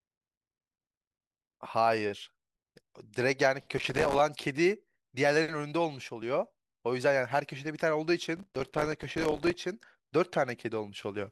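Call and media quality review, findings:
Processor overload crackle on the speech, 3.78–4.19 s and 8.37–9.57 s. The audio thread is missing its deadlines, and each late buffer plays as silence. The gaps fit buffers of a few milliseconds, about 50 across the first stretch and 100 across the second. The result is dense, gritty tearing, unlike the longer, sparser dropouts of network packet loss.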